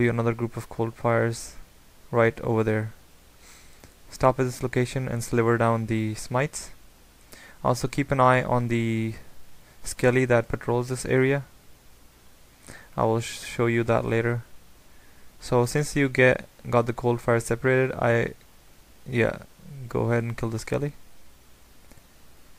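Nothing in this audio stood out as a technical problem on listening.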